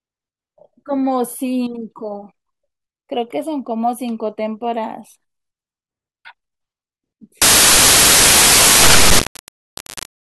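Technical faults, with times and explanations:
7.42–10.29 s: samples built from the wrong bytes. From here to the end, the speech is buried under loud, harsh broadband noise as each sample's bytes are joined wrongly, shifted, swapped or misaligned, so the rapidly fluctuating low bits dominate every value.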